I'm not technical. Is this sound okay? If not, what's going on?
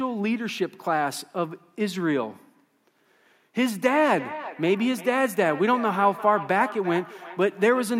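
No. From 3.6 seconds to the end there is feedback echo between two devices. Two devices in the same room are on this call, and one of them plays back what the other's microphone sent. That microphone then picks the playback up again, and its echo cancelling can't remove sound coming from a different device. As a result, the speech comes back as a repeat roughly every 0.4 seconds, each pass sounding thinner and more ringing.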